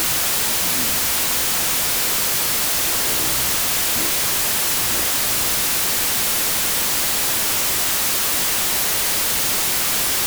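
From the first moment to the end, the audio suffers a wrong sample width fault. Data stored as 32-bit integers are being read as 16-bit ones, so each true sample splits into two values. One keeps the high bits of the signal and the other is made of low-order bytes that read as harsh noise. The original is buried in loud hiss and plays at half speed, an octave low. That constant noise bed, rather than a clean slowdown, marks it apart from a simple sample-rate mismatch.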